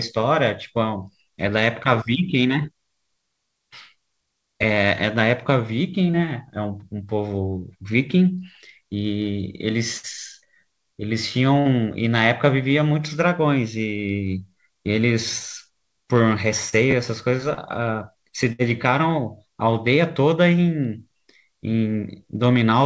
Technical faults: short concealed packet loss; burst of packet loss

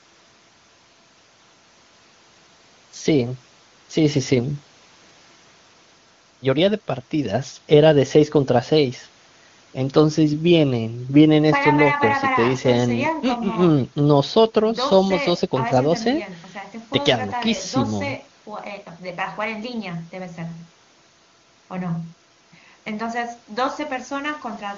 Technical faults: none

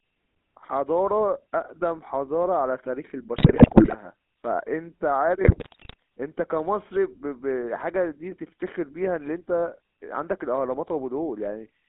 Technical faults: GSM full-rate codec; GSM bit errors

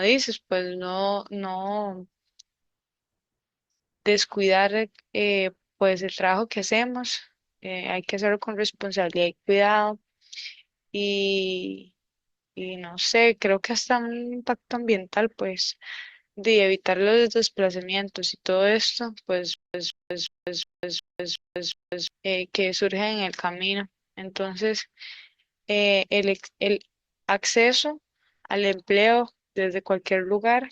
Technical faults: stutter with silent gaps

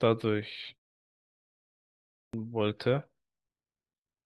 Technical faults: clipped start after a pause

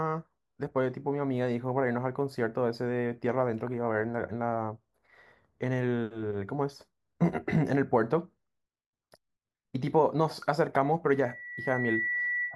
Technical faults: loudspeaker feedback squeal

